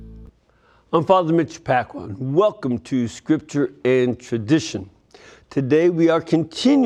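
Nothing here catches the ear as a technical problem; the audio just runs along without any glitch worth pointing out.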